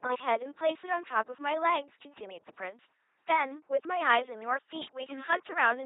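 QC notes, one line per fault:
Throughout, LPC-10 vocoder: the speech is resynthesised as either a pulse train or noise through a short vocal-tract filter, giving a heavy robotic buzz with hiss wherever voicing is misjudged, and nothing above 3.8 kHz. Unlike a codec's warble, each instant is all buzz or all noise, which fits a 2.4 kbit/s vocoder.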